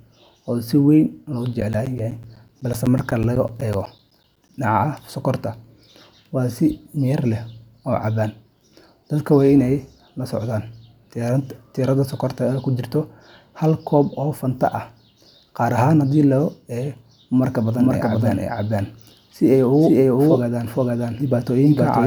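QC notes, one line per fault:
1.61–4.49 s, periodic USB or driver dropouts: roughly 10 ms gaps of silence every 0.125 s give regular ticks; waveform shows evenly spaced notches, spectrogram thin vertical blank stripes.
17.78 s to end, doubled audio track: a full-band copy at about equal level trails by roughly half a second, likely a second capture path; waveform shows overlapping duplicated shapes, spectrogram a shifted repeat with an abrupt onset.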